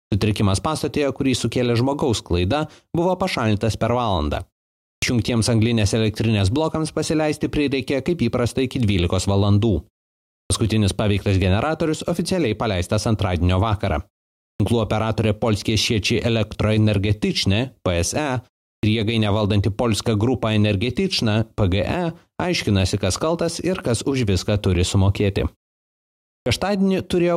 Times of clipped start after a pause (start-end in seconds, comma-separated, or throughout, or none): 4.96-5.02, 10.44-10.50, 14.54-14.60, 18.77-18.83, 26.40-26.46